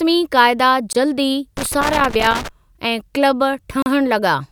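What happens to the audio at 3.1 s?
Nothing goes wrong at 3.1 s; the audio is intact at that moment.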